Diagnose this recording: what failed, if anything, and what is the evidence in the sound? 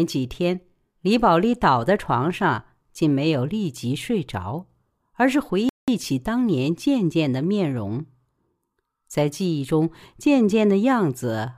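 A rebuffering stall at 5.69 to 5.88 s is a playback-stage fault. The speech drops to silence for about 188 ms, then resumes exactly where it stopped, with nothing skipped. The player's buffer ran dry and it waited for more data, which added time without losing sound.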